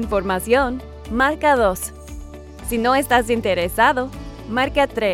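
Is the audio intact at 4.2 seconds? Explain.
Yes, at 4.2 seconds the audio is intact, with no fault present at that moment.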